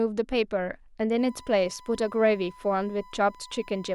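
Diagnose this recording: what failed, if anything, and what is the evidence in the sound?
A steady 1 kHz whine sits about 25 dB under the speech from 1.18 s onward: USB whine, bus-frame current leaking into the analogue ground.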